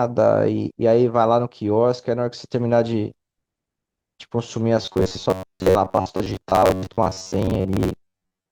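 Audio likely arrived too seldom from 4.82 to 8.51 s, so repeats, fitting roughly 11 ms buffers, replaced about half of it: robotic sound from repeated buffers, a metallic 94 Hz buzz.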